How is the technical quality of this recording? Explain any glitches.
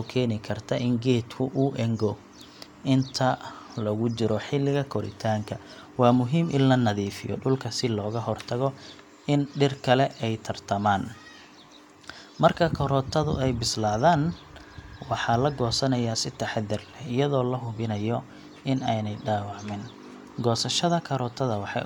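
No technical glitches can be heard anywhere in this recording.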